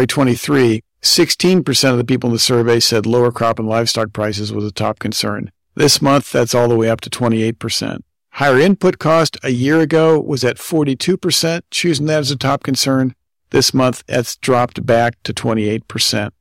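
Harsh crackle rides on the loudest moments of the speech from start to finish: hard clipping. The signal is driven about 8 dB beyond what a stage can pass, so peaks are sliced flat, around 2 percent of samples, adding high harmonics.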